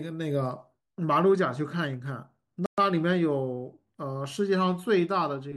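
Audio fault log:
2.66–2.78 s, playback stall: the speech cuts to silence for 120 ms, then resumes, likely because the player ran short of data or was briefly blocked.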